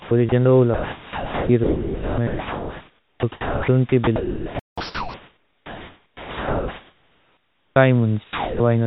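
A speech recording carried over a narrowband call path, with nothing above 4 kHz, which fits a telephone codec such as G.711, and with room noise sitting about 35 dB below the speech. Its main fault is sound chopped by the voice detector. This happens from 0.00 to 0.32 s, where 140 ms is replaced, and again across most of the clip from 0.74 to 7.76 s, where around 6.3 s in total is swapped out. The detector at the sending end is likely flipping repeatedly between transmitting and pausing, so quiet syllables and word edges are replaced by comfort noise. The result sounds choppy. Inside that stretch there is a playback stall from 4.59 to 4.78 s. The output goes silent for about 180 ms in mid-flow, most likely because the player ran out of buffered data or its audio thread was blocked. Directly after, from 4.78 to 5.14 s, comes catch-up at higher speed. The player works through the backlog at 1.5 times normal rate by resampling, which raises the pitch by roughly seven semitones, so the speech briefly sounds hurried and chipmunk-like. 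Finally, sound dropped by the voice detector occurs from 8.24 to 8.60 s. Here about 310 ms of speech is lost under 360 ms of steady comfort noise. The likely cause is the sender's detector mistaking a quiet passage or word ending for background and stopping transmission until it triggered again.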